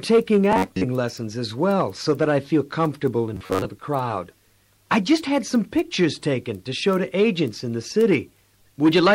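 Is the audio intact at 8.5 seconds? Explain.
Yes, the audio is intact at 8.5 seconds, with no dropout, glitch or other fault at that point.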